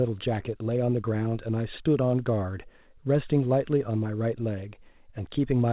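No technical faults are audible.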